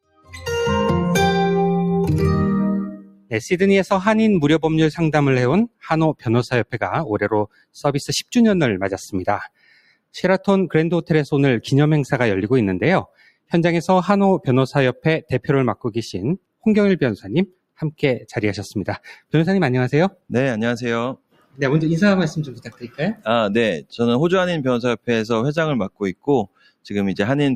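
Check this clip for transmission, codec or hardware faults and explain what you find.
A speech-oriented noise suppressor has been left active on non-speech material. It causes a continuous pumping problem and eight distinct moments where it bites much harder.

Noise suppressor applied to music or sounds, throughout: The suppressor treats sustained, steady content as noise, so held sound and decaying tails are pulled down while onsets pass. Gain swings of around 10 dB make the level pump and flutter. On a waveform, the envelope dips shortly after each attack instead of decaying smoothly. A spectrogram shows tails fading early and uneven vertical banding across sustained energy.

Sound cut by the noise suppressor, at 0.04 to 0.33 s, 2.84 to 3.33 s, 5.68 to 8.33 s, 9.5 to 10.14 s, 13.06 to 13.52 s, 15.76 to 18.02 s, 19.19 to 23.95 s and 24.98 to 26.87 s: Here the suppressor misjudges particular sounds as noise and removes them far more deeply, by about 21 to 22 dB. 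The affected stretches add up to a few hundred milliseconds per event, and roughly one and a half seconds in the longest span. The sound sinks in level or its decay is cut short. On a spectrogram these appear as dark gaps or sharply truncated decays, and on the waveform as near-flat notches.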